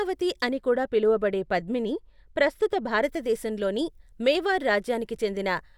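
De-emphasis applied wrongly affects this speech recording from 0.49 to 3.04 s. Across that span a treble-cut filter meant to reverse pre-emphasis acts on audio that never had the matching boost (or gets the cut a second time), so the high end rolls off in a smooth downward slope, reaching about 8 dB down at 10 kHz relative to 1 kHz. The speech there turns dull and muffled, losing its crisp upper detail.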